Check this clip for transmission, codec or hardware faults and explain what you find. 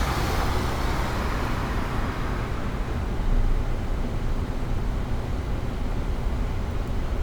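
Nothing faulty can be heard anywhere in this audio.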